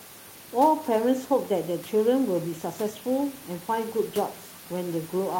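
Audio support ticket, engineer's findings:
No system fault found in the speech clip; room noise sits about 23 dB below the speech and belongs to the recording.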